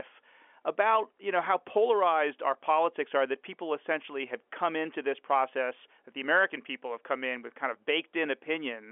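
From 5.01 to 7.93 s, one channel runs about a twentieth of a millisecond late, fitting a delay of a couple of samples, and the mono sum produces channel delay (comb filtering). The first notch lands near 10 kHz, above the telephone band, so the speech just turns slightly dull.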